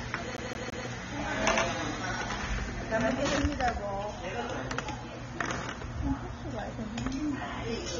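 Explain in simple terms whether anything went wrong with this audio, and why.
Three things went wrong.

The whole clip sounds dull and smeared. Nothing is heard above about 7.5 kHz, so the crisp top end is missing. Hissy and sustained parts carry a warbling, fizzy texture. This is the mark of heavy AAC compression, likely squeezed hard to save space. The encoder threw away detail it judged you wouldn't miss. At this strength, you do miss it.

From 0.37 to 0.87 s the sound stutters. A snippet about 0.17 s long plays three times in a row, with a tiny gap at each jump. This is a CD stuck on one turn. A scratch keeps throwing the player back to the same spot. The result is that fast, even skipping you may know from damaged discs.

From 1.43 to 3.37 s everything is heard twice. A second copy trails the first by roughly a tenth of a second, at about the same loudness. It has no echo tail or room sound. 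It simply switches on and off. This is a doubled audio track, likely the same sound captured again through a slower path and mixed back in.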